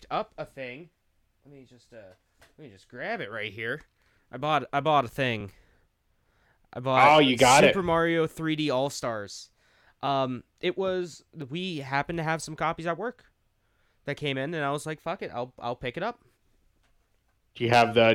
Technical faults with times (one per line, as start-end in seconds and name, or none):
5.41 overlapping chunks
11.42 overlapping chunks
17.42 overlapping chunks